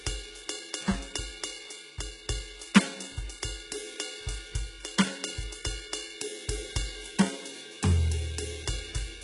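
A music clip with heavy codec damage from start to finish, most likely from HE-AAC compression at a very low rate, consistent with roughly 12 kbps. The treble is synthesized by spectral band replication, which copies lower bands upward and fits them to a coarse envelope. Harmonics therefore fail to line up above the crossover, giving sibilant and cymbal-like content a gritty, metallic edge, and nothing at all comes through above 11 kHz.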